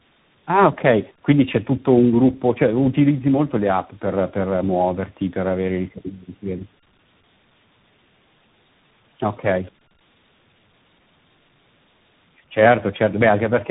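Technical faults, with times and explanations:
Throughout: tandem speech coding, the speech passing through three codecs in a row, ending in CVSD, with each re-encoding the last one's damage. Nothing above 3.8 kHz, and the roughness and warble build up beyond what a single codec would leave.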